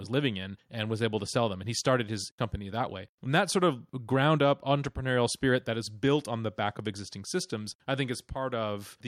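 No technical faults are audible.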